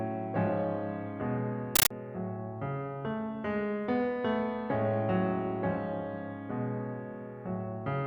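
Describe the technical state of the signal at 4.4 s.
At 4.4 s the music plays through intact, with no audible fault in the signal at that moment.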